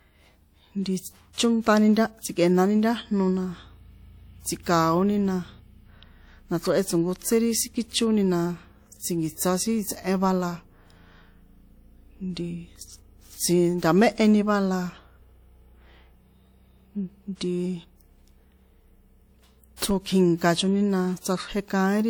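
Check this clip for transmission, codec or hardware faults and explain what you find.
A transform codec fault shows up twice: pre-echo at 1.33–1.38 s, just before "chónṭani nta tsi̱kꞌe̱nani", and at 19.76–19.82 s. Coding noise sized for each sharp onset spreads back through its block, so a short hiss runs about 49 ms and 56 ms ahead of the attacks, leaving them softened and smeared.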